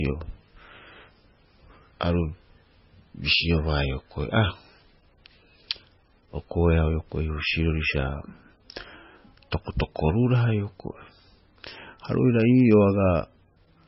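From start to finish the speech sounds watery and swirly, with nothing above 5.6 kHz and sibilants turned metallic and chirpy. This is likely heavy MP3 compression at a very low bitrate: the encoder cut the treble and let weak frequency lines flicker between frames.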